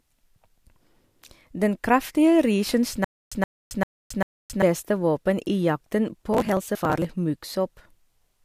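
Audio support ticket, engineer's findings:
Stutter with silent gaps, 3.05–4.62 s: a 124 ms fragment of speech replays four times at an even 394 ms period, each followed by 270 ms of digital silence. Likely a stalled player or stream buffer retrying. Unlike crackle, it is a clean, regular repetition.

Processor overload crackle, 6.33–7.05 s: gritty tearing over the speech from dozens of missed deadlines, each a short skipped piece, consistent with buffers of around 10 ms. No fragment repeats and there are no long silences, so this is not a stream stall.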